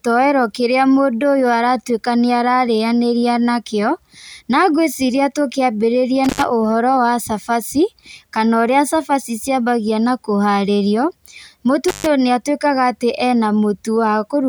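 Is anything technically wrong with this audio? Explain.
Yes, this speech has an intermittent contact fault at two points: from 6.24 to 6.44 s, where the connection opens for about 97 ms, and from 11.88 to 12.06 s, open for about 135 ms. A loose plug or cable briefly breaks the signal path, so the audio drops out with a crackle as contact breaks and remakes, leaving faint hiss in between. The waveform shows sharp spikes bracketing a near-flat gap. The spectrogram shows thin vertical broadband streaks around a dark, low-level band.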